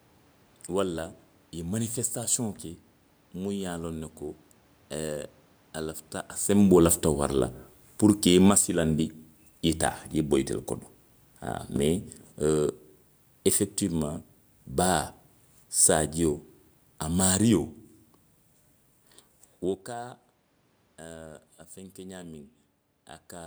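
At about 6.48 s the automatic gain starts falling. The AGC decided the input was too loud, or its background noise too strong, and began pulling its gain down, and it keeps easing off until about 17.78 s, roughly 10 dB lower in all. You can hear it because the speech and the room noise sink together. A drop in the voice alone would sound more like the talker leaning back, which does seem to happen right around 6.5 s.

Partway through that slide, from 8.58 s to 9.06 s, there's a short bout of automatic gain rising. Here the AGC briefly judged the level too low and pushed its gain up by about 6 dB over roughly half a second. The voice and the background swell together, so it comes across as a quick lift in the whole sound rather than someone moving closer. After that the overall downward drift picks back up.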